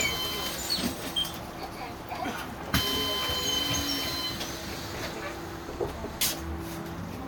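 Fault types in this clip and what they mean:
Generation loss: the sound is swirly, smeared and hollow throughout, with blurred attacks and nothing above 20 kHz, more degraded than one pass at around 128 kbit/s would explain. The likely cause is repeated MP3 re-encoding, around seven passes, each adding fresh quantisation noise on shifted frames.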